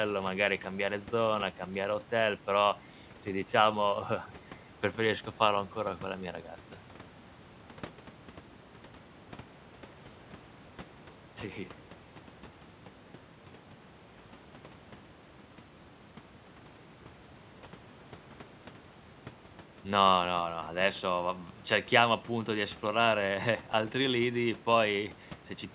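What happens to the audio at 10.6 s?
Nothing goes wrong at 10.6 s: the speech there comes through intact, carrying only the narrowband character of the G.711 call path, with nothing above 4 kHz.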